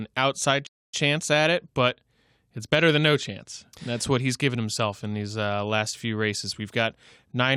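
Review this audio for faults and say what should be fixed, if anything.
Playback stall, 0.67 to 0.94 s: the speech cuts out mid-flow and the output falls completely silent for about 265 ms before resuming just ahead of "chance at it but". A silent gap of that length most likely comes from the player running dry of buffered data or its audio thread being blocked, so nothing reached the output until it recovered. To prevent it, give the player a deeper buffer and keep the audio thread free of blocking work.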